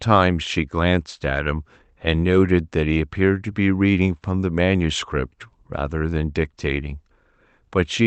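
No technical faults heard.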